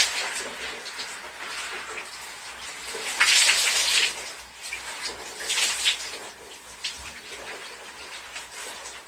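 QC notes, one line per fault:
Throughout: Opus compression, plainly audible. The sounds turn grainy and rough, with tonal parts smeared into a noisy texture where band energy has been held but fine detail replaced by folded or noise-filled content, and without the swirling dropouts typical of MP3. Bandwidth stays full, with nothing above 20.2 kHz, so the damage is texture rather than dullness. The likely cause is music-mode (CELT) encoding at a rate that fits roughly 24 kbps.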